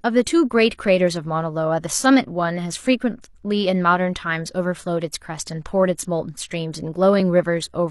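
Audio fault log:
7.20–7.24 s, overlap between stream segments: near the end the speech jumps ahead, as about 40 ms of sound drops out. Two segments' timestamps overlapped, so the player trimmed the overlap away, and the waveform doesn't join up across the cut.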